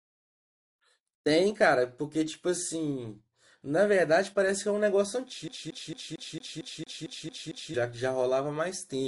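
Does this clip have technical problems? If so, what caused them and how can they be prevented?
Yes. From 5.48 to 7.74 s the speech falls into a CD stuck on one turn: the same 0.23 s slice plays ten times in a row, each repeat broken by a brief mute where the laser jumps back a track at a scratch. Unlike an echo or reverb tail, nothing decays or overlaps; the copies are identical, evenly spaced, and cut off sharply. Cleaning or replacing the disc, or ripping it with an error-correcting drive, prevents this.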